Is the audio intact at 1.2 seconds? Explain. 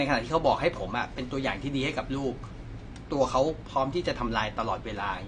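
No. At 1.2 s, as throughout the clip, the speech has likely passed through AAC compression at a low bitrate, consistent with about 32 kbps AAC-LC. With few bits to spend, the encoder discards the top of the spectrum, so nothing remains above 9.7 kHz, and it quantises the rest coarsely. The result is a dull, muffled sound with a plainly audible smeared, warbling texture, most noticeable on sibilants and sustained sounds.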